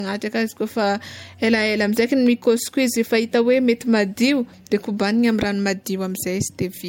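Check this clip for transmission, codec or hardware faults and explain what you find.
One codec fault runs through the whole clip. Low-bitrate audio saved at a high bitrate: the speech has nothing above about 16.6 kHz, which points to a low-bitrate MP3, likely re-encoded at a higher rate. The second pass can't restore what the first discarded, so the cut-off and the first encoding's artefacts remain.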